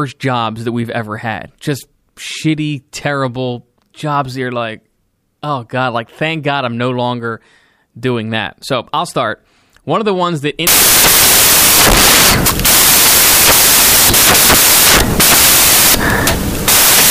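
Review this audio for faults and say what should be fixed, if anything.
At 10.67 s, just after "of the ones that", samples built from the wrong bytes take over until the end at 17.10 s: byte order or alignment is misread, so low bits dominate. Unlike steady hiss, this is loud, harsh broadband noise, close to white on loud sounds. Prevent it by checking the declared endianness and sample alignment before decoding.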